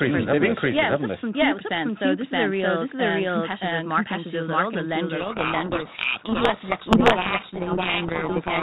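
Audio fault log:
throughout, doubled audio track: a second, full-band copy of the speech trails the original by roughly 0.7 s, at about the same level, so every phrase is answered by a flat replay of itself with no decay or room colour around it. Because the copy is just as loud, it sounds like two takes of the same talker stacked out of step. The likely cause is the signal being picked up a second time through a slower route.
5.2 s to end, codec payload misread: from 5.2 s on, the speech collapses into harsh, grinding distortion that sits on top of it and stays until the clip runs out. That fits the G.726 code words arriving with their bit order reversed relative to what the decoder expects, so each sample's difference value is rebuilt wrongly and the adaptive predictor keeps chasing garbage. Before that point the 32 kbit/s G.726 path carries the sound with only light codec roughness.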